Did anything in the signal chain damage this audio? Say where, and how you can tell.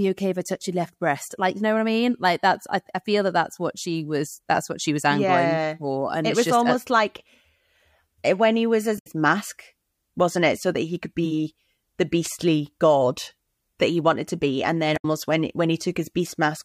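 Yes. At the codec stage, damaged data in the compressed stream produces two brief garbled bursts, at 8.95 to 9.07 s and 14.93 to 15.05 s, each about 0.12 s long. Corrupted frames there are misdecoded while the decoder loses sync and hunts for the next valid frame header.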